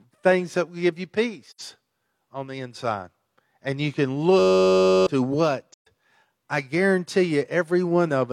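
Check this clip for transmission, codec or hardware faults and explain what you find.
The clip has three faults of two kinds: two AAC frame losses with muting and one system hang loop.

AAC frame loss with muting occurs at 1.50 to 1.61 s, just after "that will give you", and again at 5.72 to 5.87 s. The gaps last about 85 ms and 128 ms, which fits two and three lost frames. The decoder zeroed the missing spectrum. Overlapping windows fade each gap out and back in, so the holes sound soft-edged.

A system hang loop runs from 4.40 to 5.07 s, just after "you can". The host froze while the hardware kept replaying its ring buffer. A 10.67 ms slice repeats many times, which fits a 512-sample buffer. The result is a steady 93.8 Hz buzz, and around 0.7 s of audio is lost.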